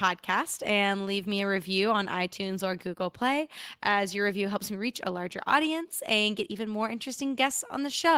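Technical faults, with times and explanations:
No technical faults can be heard in the speech. There is nothing to list with a time or an explanation.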